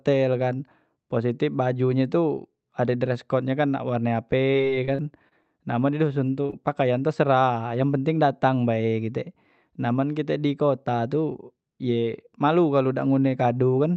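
Repeated packet loss (robotic sound) hits this speech recording from 4.51 to 5.46 s. Several short holes, the longest about 31 ms, are each bridged by extending the preceding sound, so roughly a seventh of that stretch is synthetic fill and the speech turns choppy and mechanical. Short concealed packet loss follows as two back-to-back events at 6.46 to 6.50 s and 6.50 to 6.54 s. Each drops about 20 ms that the receiver papers over with continued pitch or shaped noise before blending back, leaving a brief smear. Throughout, the call codec caps the top end near 8 kHz.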